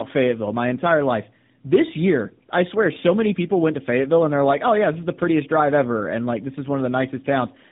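Tandem speech coding runs throughout: nothing above 3.8 kHz, and rough, warbly speech that fits GSM full rate re-encoded to AMR-NB via G.711.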